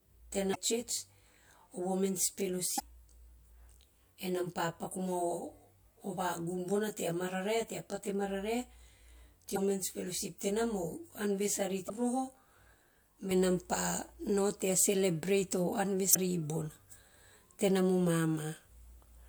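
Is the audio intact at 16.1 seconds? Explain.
No. From 16.11 to 16.16 s, damaged data in the compressed stream breaks decoder sync, producing a brief chirp, squawk, click or short hole.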